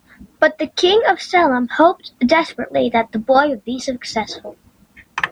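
Speech, with no technical faults to report. There is nothing here that needs a time or a cause.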